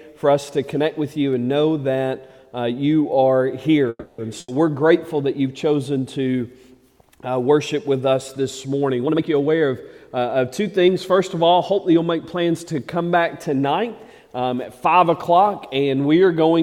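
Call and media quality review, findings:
Call audio freeze, 3.89–4.20 s: the last sound is held as a fading buzz or hiss for about 290 ms, ending in roughly 40 ms of silence. Playback then resumes where it stopped, with nothing skipped. Likely cause: delayed packets drained the jitter buffer, and the receiver's concealment stretched the final frame until arrivals resumed. This adds about 290 ms of end-to-end delay from this point.

Burst of packet loss, 4.40–4.50 s: an 80 ms stretch of concealment, where the preceding sound is extended as a decaying buzz or hiss. Playback then picks up further along, and about 80 ms of audio is permanently gone. Consecutive packets were lost or arrived past their playout deadline. The receiver filled the gap with a fading continuation instead of the real signal.

Jitter buffer speed-up, 9.03–10.89 s: audio runs at roughly 115% speed with pitch unchanged, sounding hurried across that span. 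The jitter buffer was holding excess audio, consistent with late packets arriving in a cluster after the earlier stall. To shed the surplus, the receiver cut many short pitch-period segments, around 0.3 s in total, returning to its target delay.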